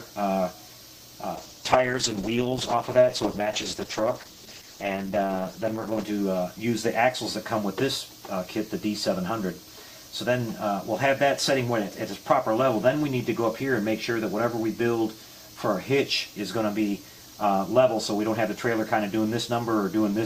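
Between 1.39 and 6.13 s the sound turns rough and muffled, the sign of a call bitrate drop, consistent with the encoder falling from roughly 48 to 11 kbps.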